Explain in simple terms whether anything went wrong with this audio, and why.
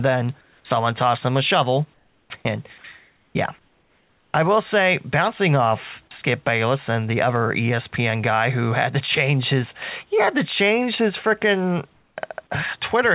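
Comfort noise in place of the background shows up in five pauses, at 0.41–0.65, 1.94–2.30, 2.99–3.35, 3.59–4.34 and 11.93–12.17 s. In each gap the real room noise is swapped for a flat, featureless hiss, slightly quieter, and the true background returns when talking resumes. Unlike a dropout, the gap never goes silent. The likely cause is the sending side pausing transmission when it detected no speech, with the receiver filling in synthetic noise.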